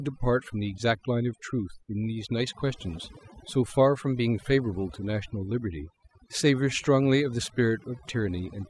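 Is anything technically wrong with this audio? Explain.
Yes. Overdone noise removal runs through the whole speech clip, start to finish. A noise reduction stage was pushed far too hard, so any frequency band sitting close to its noise estimate gets pulled down steeply or switched off entirely. Quiet components of the voice fall below that line and are removed along with the noise. Between phrases the background drops to near silence dotted with twinkling, chirpy specks.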